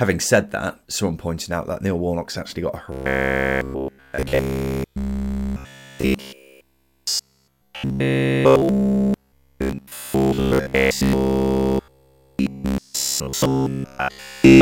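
From 2.92 s, right after "actually got a", until 14.61 s, the speech turns to robotic sound from repeated short buffers. It becomes a rigid, metallic buzz pitched at 66.8 Hz that still loosely follows the speech contour, with essentially all of the audio in that stretch made of repeats. The likely cause is audio arriving too seldom, so a segment of about 15 ms is looped while the real signal is skipped.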